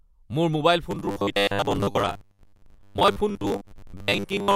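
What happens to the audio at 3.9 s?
At 3.9 s the speech has a rigid, metallic buzz at about 100 Hz that roughly follows the words: robotic sound from repeated short buffers, running from 0.91 s to the end. The likely cause is audio arriving too seldom, so the software repeats roughly 10 ms chunks to fill the gaps, replacing around half the real audio.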